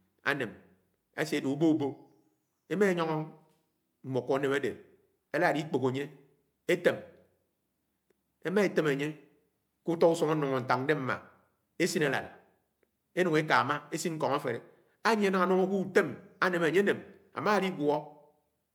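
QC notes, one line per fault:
No fault found in this speech clip on review.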